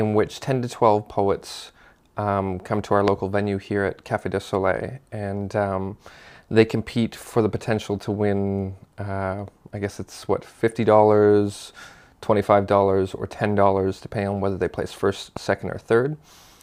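A loud pop lands at 3.08 to 3.10 s, roughly 20 dB above the surrounding sound, and a second, weaker one at 15.37 to 15.39 s, around 10 dB above. Each is a single sharp click over continuing audio, likely from a voltage spike such as a switch or static discharge.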